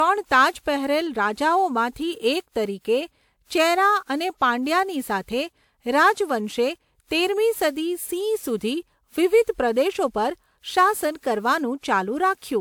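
The speech was likely re-encoded several times through a WMA 1 codec near 128 kbit/s, causing generation loss throughout: swirly, hollow smearing, blurred consonant attacks, and nothing above 20.1 kHz.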